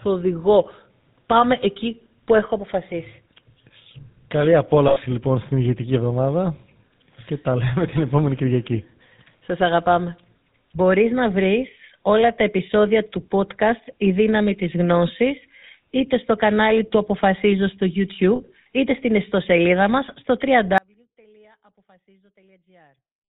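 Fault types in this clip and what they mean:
GSM full-rate codec: The whole speech clip passes through this 13 kbps vocal-tract coder. It cuts everything above 4 kHz and leaves a plainly audible buzzy, gravelly roughness.
Lost GSM frames: Twice the decoder repeats old settings, giving a brief rough metallic ring. This happens at 4.88 s, before "λοιπόν στην ηγετική εβδομάδα", and at 18.36 s, before "είτε στην ιστοσελίδα μας".
Audio dropout to a faint residue: After "στην ιστοσελίδα μας στο" at 20.78 s the speech cuts off abruptly. Only a faint trace remains, roughly 35 dB down, to the end. A likely signal loss upstream.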